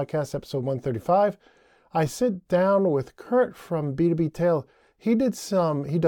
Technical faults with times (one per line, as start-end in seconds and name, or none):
none